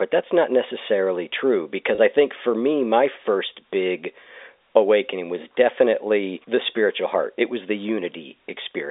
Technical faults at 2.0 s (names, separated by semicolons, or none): packet loss with pitch repetition